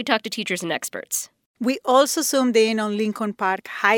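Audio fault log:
No faults are audible in this speech recording.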